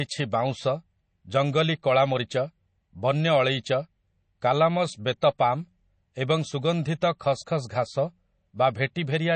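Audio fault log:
Throughout, MP3 compression: the speech has a plainly audible watery, swirling texture, with smeared attacks and nothing above 8.3 kHz, so the s sounds lose their top end. The likely cause is MP3 encoding at a low rate, which fits a bitrate around 32 kbps. With so few bits, the encoder drops weaker frequency lines that then flicker in and out from frame to frame, and it cuts off the treble entirely.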